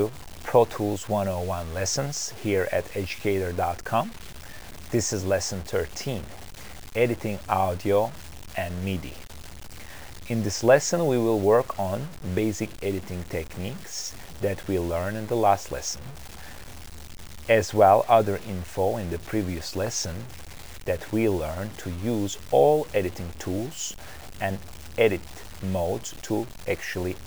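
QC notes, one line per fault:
Throughout: low bit depth without dither, likely from truncating the audio to about 7 bits. The grainy distortion tracks the signal, around 20 dB below it. Quiet sounds turn gritty. The waveform shows visible stair-steps, and the spectrogram shows a signal-following noise haze with no flat noise floor.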